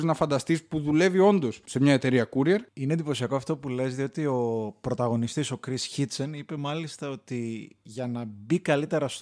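No technical faults can be heard anywhere in the speech recording.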